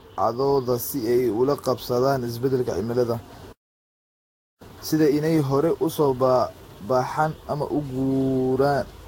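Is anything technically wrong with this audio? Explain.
Yes, there are three faults. Generation loss runs throughout: the speech sounds swirly, hollow and smeared, with nothing above 16.6 kHz, likely from about five successive lossy Vorbis re-encodes. A playback stall at 3.52 to 4.62 s silences the speech for about 1.08 s, likely because the player ran short of data. Time-compressed catch-up follows from 4.62 to 7.62 s: small pieces are cut and cross-faded, so the speech runs about 1.15 times fast at normal pitch.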